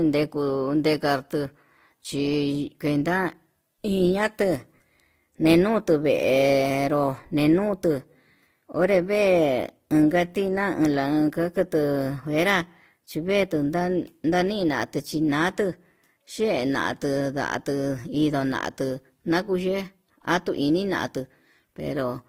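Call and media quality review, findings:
Speech throughout: two distinct artefact textures stacked, nothing above 20.2 kHz. Likely transcoding between lossy codecs, Vorbis into Opus, fitting 48 then 24 kbit/s; Opus re-encodes Vorbis's artefacts and adds its own.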